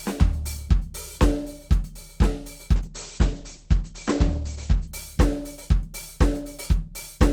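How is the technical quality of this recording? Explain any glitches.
The recording has one clear glitch, a call bitrate drop lasting from 2.76 s to 4.97 s. The call's bandwidth estimate fell, so the encoder was forced to code the music with far fewer bits, roughly a fall from 48 kbps to 9 kbps, held at its lowest for about 2.1 s. At that rate the codec discards everything above 8 kHz, so the music turns muffled and coarse, with a rough, watery texture, until the bitrate recovers.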